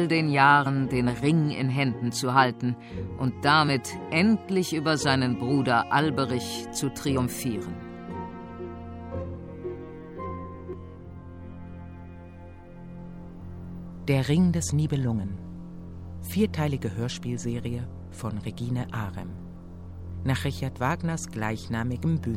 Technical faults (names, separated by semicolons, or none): damaged data in a compressed stream